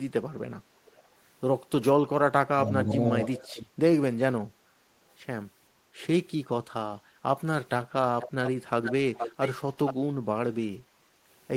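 At 0.86–1.08 s, a faint delayed copy of the speech, about 35 dB below it, trails 513 ms behind. This is an echo leak, likely loudspeaker pickup that the far end's echo canceller left in and sent back.

From 2.11 to 3.79 s, the talker dips by up to roughly 25 dB, cutting out in pieces that add up to about a second. This is speech suppressed in double talk, likely the canceller turning everything down while both sides spoke.

Inside that stretch, brief echo scraps return at 2.89–2.94 s and 3.39–3.47 s, about 20 and 25 dB down, again 513 ms late.

The echo leak then grows much louder at 8.21–8.51 s, 8.84–9.51 s and 9.86–9.94 s. Its delay is now 472 ms, and it sits only about 10, 5 and 10 dB below the speech.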